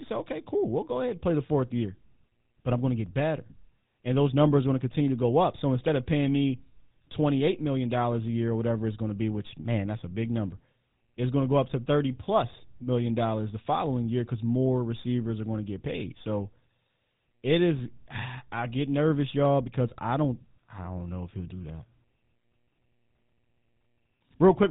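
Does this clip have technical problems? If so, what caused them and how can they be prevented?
Yes. The speech carries GSM full-rate codec damage from start to finish, and it is plainly audible. The codec models the vocal tract with a short-term filter and excites it with regularly spaced pulses, keeping only every third excitation sample. This gives the voice a buzzy, gravelly roughness, which fits the 13 kbps full-rate mode. Nothing comes through above 3.8 kHz, so sibilants and upper harmonics are missing and the speech sounds narrow and muffled. To prevent it, capture or transmit over a wideband or modern codec such as AMR-WB or Opus, and avoid routing the audio through a legacy GSM link.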